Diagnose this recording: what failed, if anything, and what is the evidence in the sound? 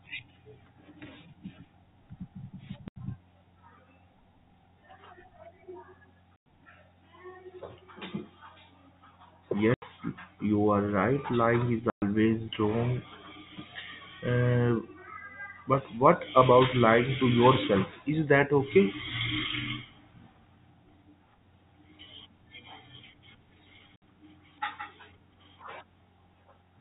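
The failure is in the network: packet loss filled with silence. The speech drops to dead silence at 2.88 s for 80 ms, 6.36 s for 100 ms, 9.74 s for 80 ms, 11.9 s for 120 ms and 23.96 s for 60 ms. Every gap is a multiple of 20 ms, which fits 20 ms packets. The receiver had no concealment and played silence in their place. The G.711 telephone band underneath stays intact.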